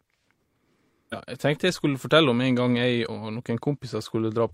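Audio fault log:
1.09–1.15 s, damaged data in a compressed stream: a brief glitch of about 60 ms breaks into the speech just before "jeg tenkte jeg skulle". Corrupted bytes in this stretch of the compressed file gave the decoder frames it could not read properly, so it lost sync and produced garbage output until it found the next valid frame header and resumed normal decoding.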